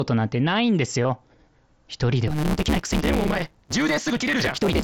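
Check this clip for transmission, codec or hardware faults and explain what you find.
Two faults here, both heard over mSBC headset audio that's carrying the wideband speech with just a light grain.

At 1.03 s there's concealed Bluetooth headset packet loss: about 15 ms went missing, likely a couple of frames, and the receiver patched it with recent waveform.

From 2.27 s to the end there's a block size mismatch (truncated): each block's tail gets dropped, giving a 150 Hz buzz and speech rushing about 1.6 times fast, consistent with 512-sample blocks.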